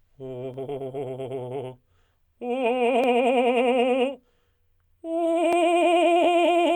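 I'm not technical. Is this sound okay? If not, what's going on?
No. The music was likely passed between two pieces of equipment whose internal clocks run at slightly different speeds. The gap between them slowly fills up or runs dry until a tiny slice of sound, roughly 30 samples, is skipped or played twice. This fault is called clock drift buffer slips. You hear it as a small click or pop about every 1.25 seconds, roughly five times between 0.54 and 5.53 seconds.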